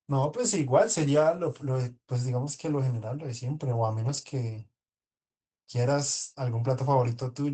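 In this speech clip, the sound turns briefly rougher and noisier from 1.01 to 1.03 s and again, for longer, from 3.97 to 4.23 s. Both are a lost packet rebuilt from error correction: the following packet carried a low-bitrate copy, so the decoder filled the hole with coarser audio. The first fits a single lost packet, the second several separate ones. Unlike plain loss concealment, there is no gap, fade or smeared repetition, only degraded texture.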